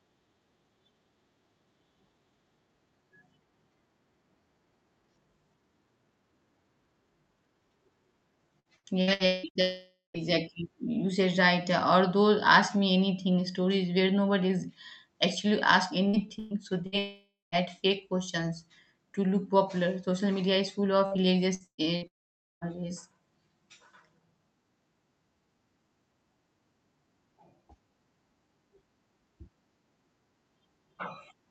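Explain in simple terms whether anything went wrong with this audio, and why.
Yes, something went wrong three times in this speech clip, and each time it followed the same pattern: a burst of lost data, then a longer break.

Repeated packet loss (robotic sound): The audio travels over a call connection in small chunks, and several chunks in a row went missing. The receiver covered each hole by stretching the sound it had just played. That happens from 8.59 to 9.58 s with six short holes, from 16.08 to 16.95 s with four, and from 21.06 to 22.04 s, right after "media is full", with four more. The longest hole is under a fifth of a second. You hear choppy speech with bits missing.

Long network dropout: Right after each choppy patch, the speech cuts out for roughly half a second, at 9.61 to 10.17 s, 16.98 to 17.55 s and 22.07 to 22.76 s. First a fading buzz or hiss carries on the last sound, then there is silence. 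The silence is longest in the third break, where it lasts about half a second. The speech then comes back with that piece gone. This was likely the connection stalling completely, so no audio arrived at all for that stretch.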